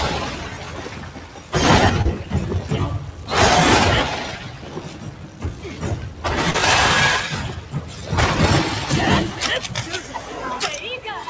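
A speech-tuned noise suppressor was left running on this non-speech audio, so held parts and tails keep getting pulled down, with the level swinging by around 10 dB. The sound cut by the noise suppressor dips hardest at 0.47–1.53 s (about 6 dB), 4.45–5.65 s and 7.59–8.07 s (about 5 dB each). There's also short concealed packet loss at 2.02–2.07 s and 6.51–6.56 s, where the gap gets patched and comes through as a quick smear. All of it sits inside a band that stops at 8 kHz, which fits a wideband call codec like G.722.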